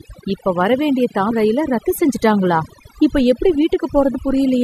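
Overdone noise removal runs through the whole speech clip. A noise reducer set far too strong keeps pulling individual frequency bands down or out whenever they sit close to its noise estimate, and it takes the quieter parts of the voice with them. Between phrases the background drops to near silence dotted with twinkling specks, while the voice has its softer detail stripped away along with the noise.

Damaged data in a compressed stream appears at 1.3 s, just after "இப்ப வர வேண்டிய" and before "ரயில ரத்து செஞ்சுட்டாங்களா", and again at 4.14 s. At each point part of the compressed stream is corrupted, so the decoder misreads the affected frame, loses sync and has to search for the next valid frame header. Each event is a brief chirp or blip.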